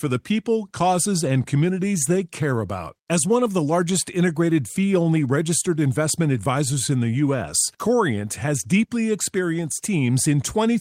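No technical faults can be heard anywhere in this recording.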